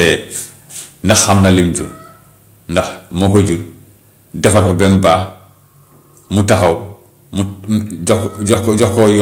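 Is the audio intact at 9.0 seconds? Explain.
No. From 8.49 to 9.1 s the loudest speech has a harsh, crackling edge, with a small share of peaks flattened. This is microphone overload: the input likely ran about 6 dB past the converter's limit, so peak tops were sheared off. At 9.03 s, inside that span, the speech and background drop abruptly by about 2 dB. That fits the microphone volume being stepped down, likely by the call software reacting to the clipping.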